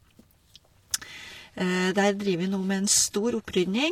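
From 1.12 s to the end, the speech suddenly turns dull in the treble, with nothing above 14.9 kHz and no gap. This is an adaptive stream dropping to a lower bitrate, consistent with a switch from around 96 to 24 kbit/s.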